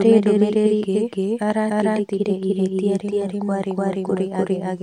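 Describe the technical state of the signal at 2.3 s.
At 2.3 s the speech carries a doubled audio track, and it runs through the whole clip. A second full-band copy of the same speech trails the original by about 0.3 s. It sits at roughly the same loudness, so the two compete evenly. The copy has no decay or room colour, so it reads as a clean repeat rather than an echo. The likely cause is the signal being captured twice along paths of different speed.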